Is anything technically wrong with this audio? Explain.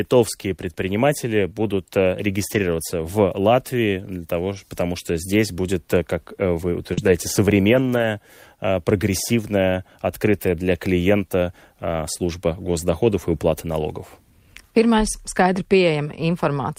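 Yes, the speech has packet-loss faults of two kinds, and in both the sound is filled in rather than dropped to silence.

Lost packets rebuilt from error correction occur at 2.47–2.57 s (right after "предприниматели будут"), 6.97–7.08 s, and 7.74–8.04 s (just before "прогрессивная открытая для клиента"). The decoder replaced the missing audio with low-bitrate copies carried in the following packets, about 60 ms in the first two spots and 160 ms in the last, which fits roughly three and eight lost packets. Those stretches sound rougher and noisier but continuous. Unlike concealment, the content itself is still there.

A short concealed packet loss falls at 6.93–7.04 s, after "здесь будет как вы". About 40 ms never arrived, and the receiver synthesised around 36 ms by extending the preceding sound, adding roughly 10 ms of timing shift. Because the audio there is a guess rather than a degraded copy, it comes across as a brief smear or wobble.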